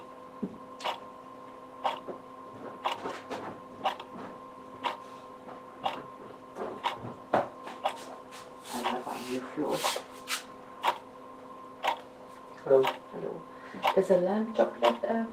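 Nothing here sounds technically amiss; the sounds in the recording come across without any audible trouble along the way.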